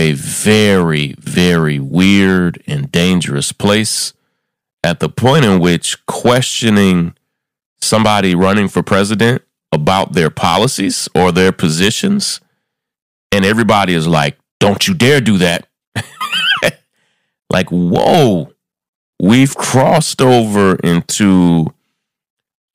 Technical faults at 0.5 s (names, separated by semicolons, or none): hard clipping